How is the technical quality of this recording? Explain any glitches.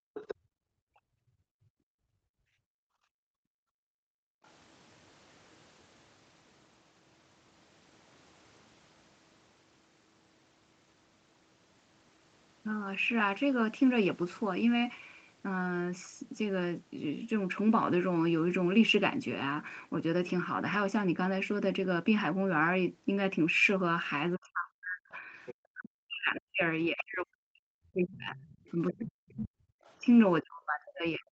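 The recording has echo-canceller problems at the start and end. It is a processed call microphone path with nothing above 8 kHz.

Background gated by the echo canceller: from 0.0 to 4.44 s the room sound dips by up to about 39 dB, because the canceller clamped the microphone while the loudspeaker played.

Other side's voice leaking through: at 0.14 to 0.35 s (about 10 dB below the speech), 25.46 to 25.54 s and 26.98 to 27.04 s (about 15 dB below), and 28.36 to 29.93 s (about 25 dB below), second-voice fragments appear, likely loudspeaker echo the canceller left uncancelled.

Speech suppressed in double talk: from 24.36 s to the end, the talker's voice drops by as much as roughly 40 dB, likely because the canceller attenuated everything while both sides spoke at once.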